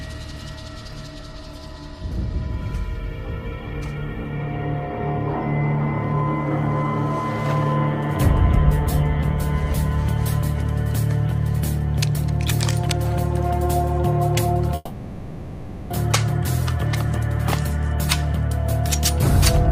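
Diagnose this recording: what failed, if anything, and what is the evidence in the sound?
From 14.75 s to 15.91 s, about 1.15 s of the audio is gone and never comes back. The receiver filled the whole gap, stretching the last sound into a smeared buzz or hiss rather than dropping to silence, and the audio then resumes further on with the missing stretch skipped. This is likely a long network dropout at the network stage. Unlike short packet loss, the fill runs for over a second. Unlike a storage or playback stall, the content jumps ahead instead of pausing.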